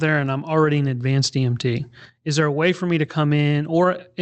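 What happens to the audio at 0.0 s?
Nothing goes wrong at 0.0 s; the audio is intact there, passing through the call path's codec as expected.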